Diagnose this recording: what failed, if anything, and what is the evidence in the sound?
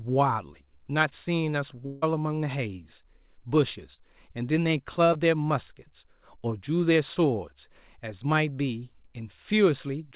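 Network stage. From 1.86 to 2.04 s, 160 ms of speech becomes a fading, extrapolated continuation and then resumes, most likely a long network dropout.

Short concealed packet loss, also at the network stage. Brief smears occur at 3.94 s (40 ms lost) and 5.13 s (20 ms lost), where the decoder extended the preceding sound.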